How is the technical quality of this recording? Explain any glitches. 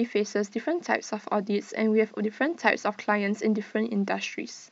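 No technical faults or glitches are audible in the recording.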